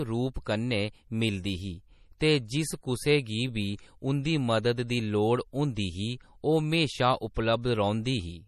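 Throughout the speech, MP3 compression is plainly audible and is the likely cause: the treble stops at 14 kHz and weak frequency lines switch on and off between frames, giving a watery, swirly texture, which points to a low bitrate of about 40 kbps.

Pre-echo appears from 0.34 to 0.36 s and again at 7.34 s. Each time, quantisation noise spread across a transform block reaches about 20 ms ahead of a sharp attack, so a brief hiss precedes it and the onset sounds soft.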